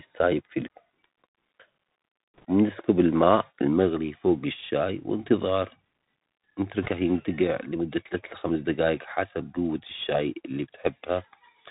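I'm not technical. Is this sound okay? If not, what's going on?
No. The whole recording has gone through a Bluetooth CVSD headset codec, the basic way headsets send voice. It cuts everything above about 4 kHz, so speech sounds muffled and phone-like, with scratchy s sounds and a fine grainy hiss underneath, not just a dull tone.

There are also bit errors on a Bluetooth voice link, at 2.37 to 2.45 seconds and again at 6.82 to 6.88 seconds. These are brief bursts of rushing, crackly noise rather than sharp clicks or silent gaps, because each damaged bit only nudges the sound slightly.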